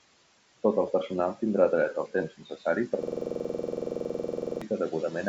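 Noise suppressor artifacts run through the whole clip. The suppressor pulls the room noise down by about 17 dB, judging each frequency band frame by frame. The residue sinks in pauses and swells under the speech.

Speech cut by the noise suppressor occurs from 2.3 to 2.66 s. Here the suppressor mistook parts of the speech for background and ducked them by up to about 13 dB. Roughly 150 ms of quiet sound in that stretch comes out swallowed and faint.

A system hang loop runs from 3.03 to 4.62 s. The machine or driver stalled while the audio hardware kept replaying one 46 ms piece of its ring buffer, which fits a 2048-sample buffer. That piece repeats 34 times at 21.5 Hz, producing a rapid, rattling stutter.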